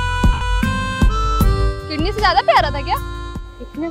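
From 0.33 to 0.41 s the sound smears into noisy hiss and fades: lost LE Audio frames, about 80 ms, which fits eight 10 ms frames concealed by the decoder.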